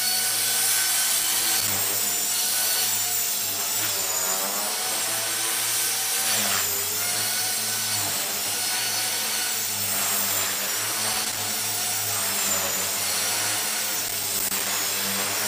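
Loose connector crackle appears three times: 1.13 to 1.72 s, 11.13 to 11.40 s, and 14.08 to 14.66 s. A worn or dirty contact keeps making and breaking. The signal chops in and out. It sounds like irregular bursts of scratchy crackle.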